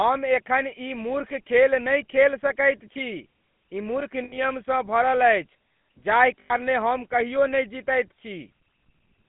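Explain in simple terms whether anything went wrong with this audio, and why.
The speech went through the GSM full-rate codec, an old phone codec that rebuilds the sound roughly and cuts everything above 3.5 kHz, so it sounds buzzy and gravelly throughout. There were also lost GSM frames from 4.24 to 4.39 s and from 6.40 to 6.54 s: the phone repeated its last good sound for about 80 and 100 ms, leaving brief rough, metallic rings.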